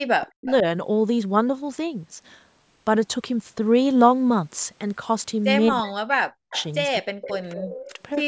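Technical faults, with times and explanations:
0.16–0.65 s, 5.71–6.57 s, 7.01–8.17 s: speech suppressed in double talk. The talker's level falls away sharply, by around 40 dB at worst. The likely cause is an echo canceller that cannot tell the talker from loudspeaker echo and turns both down.
0.46–0.52 s, 6.53–6.67 s, 7.24–7.32 s, 7.54–7.65 s, 7.82–7.93 s: echo leak. Short, faint scraps of the voice return 231 to 242 ms late. They sit about 15 to 20 dB below the speech. This is likely loudspeaker pickup that the far end's canceller did not fully remove.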